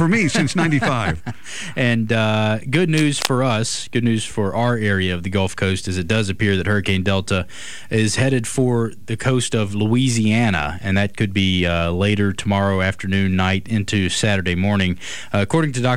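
The audio carries a burst of cable scratch noise from 2.96 to 3.30 s, a dense, irregular rustle sitting only about 10 dB below the program. The likely cause is a worn cable, connector or control being moved, its contact resistance fluctuating rapidly. What separates it from clicks or crackle is continuity: rather than isolated impulses spread through the track, it forms one clustered scratchy patch lasting about a third of a second, then stops.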